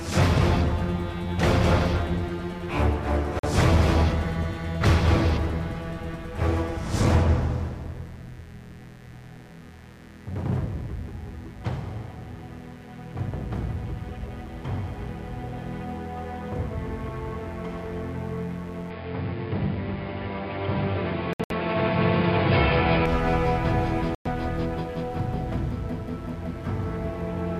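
A mains buzz runs through the whole clip: a steady, raspy hum built on 60 Hz, sitting roughly 30 dB below the sound. Sharp spikes from the mains supply add a stack of harmonics, seen on a spectrogram as evenly spaced horizontal lines climbing well into the kilohertz range.

At 3.39 s the sound cuts out for about 43 ms and resumes as if it had kept playing. This is likely a Bluetooth dropout, where late packets were discarded, and the length fits about two lost frames. The waveform shows a flat gap, and the spectrogram shows a clean vertical blank.

From 18.90 s to 23.06 s the input was likely switched to a poorer device. The top end vanishes above 5.1 kHz, turning the sound dull and boxy with no gap and no level change, and a faint new noise floor appears roughly 45 dB down. The spectrogram shows a hard ceiling across the stretch.

Within that stretch, another likely Bluetooth dropout scatters several short holes over about 171 ms from 21.33 s to 21.52 s, totalling 128 ms of silence with the longest single hole 64 ms. 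The result is a stuttering, broken-up sound, seen as a cluster of blank columns.

At 24.15 s a further likely dropout silences the audio for about 107 ms, consistent with roughly five lost frames, and the sound picks up again slightly further along. It appears as one wide blank slot.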